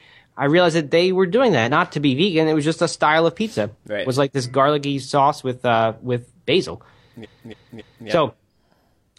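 At 7.20 s, right after "with uh with basil", repeated frames cause a stutter until 8.04 s. A 0.28 s block of speech plays three extra times, which fits a run of six frames. This adds 0.84 s.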